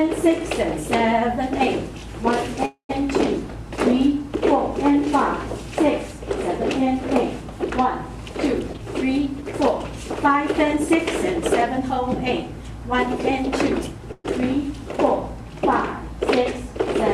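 At 2.65 s the sound stops moving forward and its last moment hangs on as a fading buzz or hiss that dies to silence, before the audio resumes at 2.91 s. This is a call audio freeze, likely from packets held up in transit until the jitter buffer ran empty. About 237 ms was filled in, so a gap was inserted and nothing is missing.

From 8.59 s to 10.92 s the audio runs hurried at about 105% speed while its pitch stays the same. This is a jitter buffer speed-up. The receiver held more audio than it aimed for and trimmed short pitch-period pieces again and again, removing around 150 ms in total to bring the delay back down.

At 14.12 s the sound stalls again in the same way, stretching into a fading buzz or hiss with a brief silence before it picks up at 14.26 s. This second call audio freeze fills about 121 ms, and again nothing is lost.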